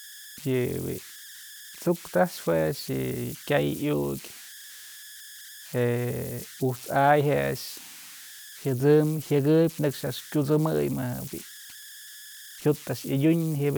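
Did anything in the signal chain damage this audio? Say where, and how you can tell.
Yes. Converter idle tones run through the whole clip: an idle tone sits in the pauses between phrases, and a grainy texture lies under the speech, about 19 dB below the signal, with its tone around 1.5 kHz. The damage happened at the converter stage. A delta-sigma converter working without dither settles into repeating bit patterns whenever its input gets small, and those cycles become an audible tone whose pitch follows the input's offset rather than the speech itself.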